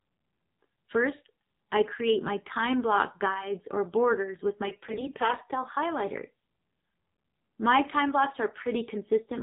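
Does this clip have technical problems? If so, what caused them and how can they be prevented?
Yes. The whole thing has gone through an AMR narrowband mobile codec: nothing above 4 kHz, and the speech sounds buzzy and synthetic, which fits one of the lower AMR-NB modes, around 7.4 kbps. You can head that off by using a wideband codec or a higher AMR mode.

Right after "guides or borders with", from about 4.66 to 5.43 s, there are AMR bit errors. The speech keeps roughly its pitch and level but goes hoarse, scratchy and gargly, because the weakly protected bits in each frame are arriving flipped, on the order of several percent of them. The excitation pulses land in the wrong places, and the pitch, gain and spectral values drift. A stronger radio link or better channel coding on the unprotected bits would prevent it.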